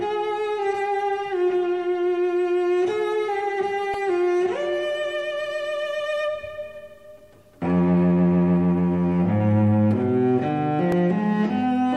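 Two tiny glitches show up in this audio, at 3.94 s and again at 10.92 s, and both are a repeated buffer. When fresh audio didn't arrive in time, the device replayed its last chunk, about 1.33 ms long, which fits a 64-sample buffer. It looped three extra times at the first spot and twice at the second, so you hear a quick click or buzz rather than a stutter, and a few milliseconds of real audio go missing each time.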